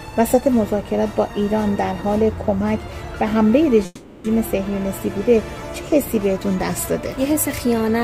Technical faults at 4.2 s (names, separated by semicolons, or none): call audio freeze